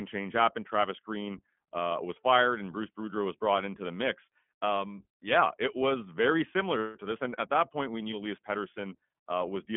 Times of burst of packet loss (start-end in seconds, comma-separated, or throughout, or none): none